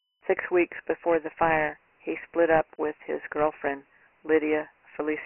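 Dialogic VOX ADPCM damage runs through the whole of this speech clip, from start to finish. Nothing is heard above 3 kHz, which points to 4-bit ADPCM at 6,000 samples a second, consistent with a 24 kbps stream. The thin, boxy sound reflects a line band of roughly 300 Hz to 3.6 kHz, further cut by the codec. The coarse adaptive step sizes leave a heavy, gritty hiss that tracks the speech.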